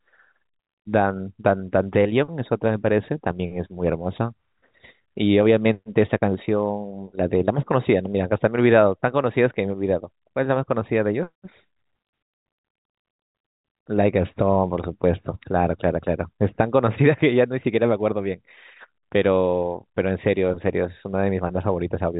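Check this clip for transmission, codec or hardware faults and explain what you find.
No transmission, codec or hardware faults are audible in this speech; the band stops at 4 kHz and a faint level-following hiss is present, as expected of G.711 telephone coding.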